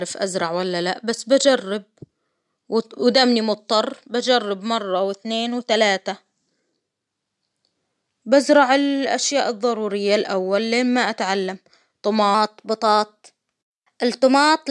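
Speech clip with a wrong sample rate fault from 12.35 s to the end at 14.71 s. The audio runs 1.09 times fast and about 1.5 semitones sharp, so the voice sounds higher and hurried, which fits 22 kHz material played back at 24 kHz without conversion.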